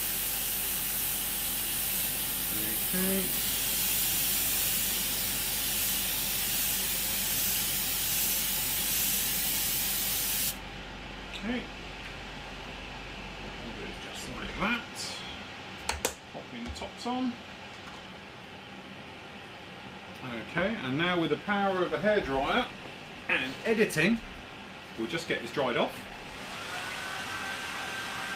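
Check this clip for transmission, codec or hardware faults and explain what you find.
Nothing in the signal points to trouble in the transmission path, the encoding or the playback hardware, and it holds together without any audible break or distortion.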